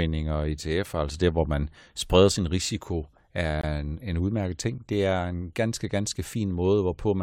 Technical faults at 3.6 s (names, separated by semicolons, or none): gap between stream segments